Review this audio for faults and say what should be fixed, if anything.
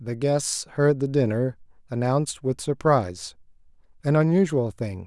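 No faults turn up in the review of this audio, so nothing needs to be fixed.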